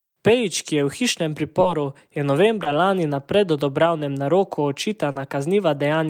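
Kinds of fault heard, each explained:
Short concealed packet loss: three brief dropouts in the speech, where chunks never arrived in time and the receiver papered over them by stretching out the last bit of sound before blending back in. You hear it as quick smears, around 1.61 to 1.65 s and 2.63 to 2.67 s (about 20 ms each), then a longer 40 ms patch from 5.11 to 5.17 s.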